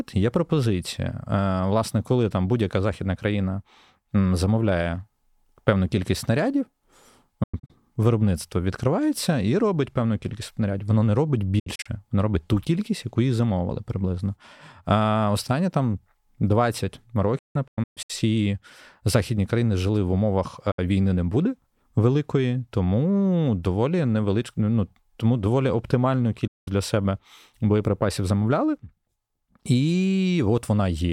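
Speech with digital broadcast dropout. The receiver lost good frames and muted, fading out and back in over 8 ms. Gaps fall at 7.43–7.70, 11.59–11.86, 17.38–18.10, 20.71–20.79 and 26.47–26.68 s. The first three break into several short holes. The sound is lost during each gap.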